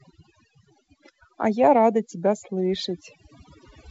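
From start to finish the speech carries overdone noise removal: a suppressor set too aggressively silences individual frequency bands whenever they sit near its noise estimate, taking soft parts of the voice with them. The background collapses to near silence dotted with twinkling specks. Unlike a plain noise gate, which cuts everything together, the damage here is scattered across frequency. It also differs from the light hiss of the G.722 wideband telephone coding heard alongside it, whose content stops near 7.8 kHz.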